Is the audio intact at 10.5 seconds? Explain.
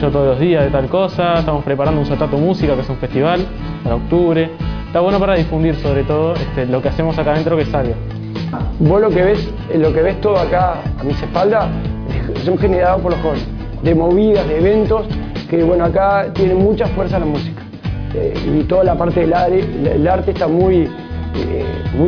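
Yes, the audio is intact at 10.5 seconds, with no dropout, click, distortion or other fault to be heard at that point.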